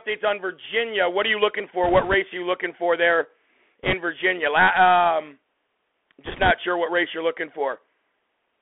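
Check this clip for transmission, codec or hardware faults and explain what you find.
The speech has two faults: a narrowband Bluetooth CVSD headset codec throughout, and three bursts of bit errors on the Bluetooth voice link.

Bluetooth CVSD headset codec, whole clip: one-bit up/down coding with an adaptive step, consistent with a 64 kbps CVSD stream, passes only about 300 Hz to 3.4 kHz. It leaves scratchy s sounds and a granular hiss. A spectrogram shows an empty band above 3.4 kHz.

Bit errors on a Bluetooth voice link, at 1.84–2.14 s, 3.83–3.93 s and 6.25–6.51 s: flipped bits at a few percent add a rushing crackle with no loud clicks. These bursts appear as broadband noise patches within the passband, not as waveform spikes.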